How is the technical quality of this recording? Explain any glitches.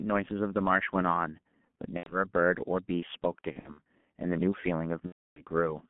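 The technical quality is poor: the whole recording carries heavy low-bitrate codec damage, and the speech breaks up three times with packet-loss artefacts.

G.723.1 codec, throughout: The speech is confined to roughly 150 Hz to 3.4 kHz, a telephone band. The coarse, hoarse texture fits a codec running at about 6.3 kbit/s. Because it works in 30 ms blocks and updates its model of the voice slowly, consonants smear together and the voice sounds muffled and rough.

VoIP packet loss concealed by the speech codec, at 1.97–2.14 s, 3.53–3.80 s and 5.06–5.42 s: When packets went missing, the decoder filled the gaps by repeating its last pitch and filter with falling gain. That turns the speech into a buzzy tone or a coloured noise that fades. The first gap is about 90 ms long, which fits three lost frames. The second spreads about 150 ms of loss across 240 ms, with no single run longer than 60 ms. 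The third, about 300 ms long, is the longest. After each gap the voice stays weak briefly while the decoder recovers.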